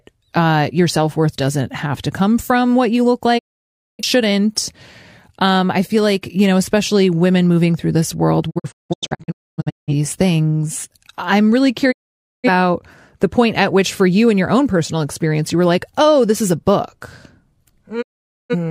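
The speech cuts to silence through a quick 20 ms fade at 3.37 s after "from what you look", in several short holes from 8.49 to 9.93 s after "moving through this world", at 11.91 s after "these things I'm really", and at 18.01 s. These are digital broadcast dropouts: the receiver lost good frames and muted until they returned, so that audio is gone.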